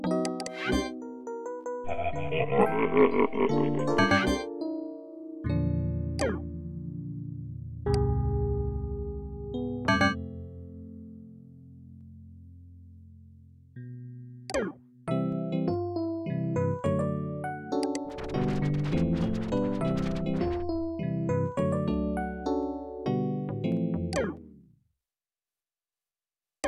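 Four sharp single clicks stand out in the audio, at 12.01, 18.10, 19.99 and 23.72 s, each showing as a thin vertical line top to bottom in the spectrum. They're most likely dropped samples: a fraction of a millisecond goes missing from the stream, so the waveform jumps straight from one value to a later one. Nothing audible is lost, but that instant step is what you hear as the click.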